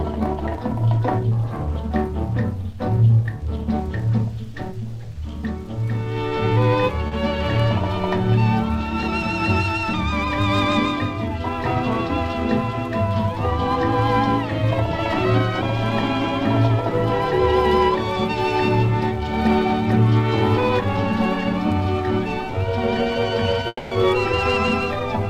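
A brief smear in the sound at about 7.07 to 7.13 s is short concealed packet loss: some 40 ms of audio arrived too late for the decoder, so the receiver stretched the preceding sound across the gap and blended back into the real signal. From 23.67 to 23.93 s the sound turns into a fading continuation of itself, ending in about 20 ms of silence before the audio resumes further on. This is likely a long network dropout, in which roughly a quarter second (240 ms) never arrived and was papered over by concealment.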